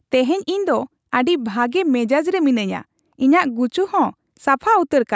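No technical faults can be heard.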